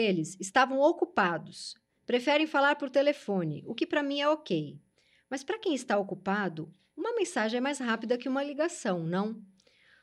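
Clock slip clicks run through this speech clip from 0.11 s to 9.98 s, a faint rattle of ticks about every 0.05 s. Each is a single dropped or repeated sample, likely from two unsynchronised clocks drifting apart by roughly 400 ppm.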